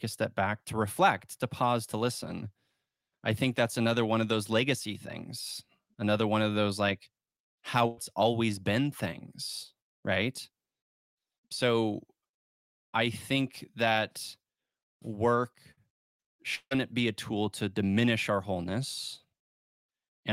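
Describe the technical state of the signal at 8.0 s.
Right around 8.0 s there's a burst of packet loss from 7.87 to 7.99 s. The receiver stretches and fades the last sound for about 100 ms, then jumps ahead to "always been things right" with a chunk missing.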